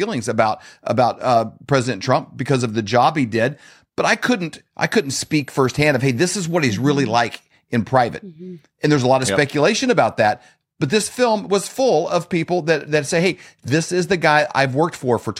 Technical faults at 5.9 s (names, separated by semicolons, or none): switching supply whistle